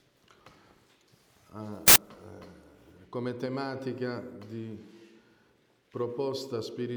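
At 1.88 s there's a hard-edged blast of very loud white noise that stops just as abruptly at 1.96 s, about 80 ms in all. That's file tags played as audio: the player has read an embedded cover picture as if it were sample data. Because picture data is already compressed, its bytes look essentially random, so instead of a tonal rasp you get very loud, dense, flat static.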